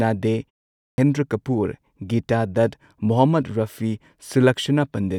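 Speech with a clipped start after a pause. After a 0.3 s silence, the sound resumes abruptly at 0.72 s, missing its opening until 0.98 s. About 260 ms is swallowed. The output device slept during the gap and woke too late.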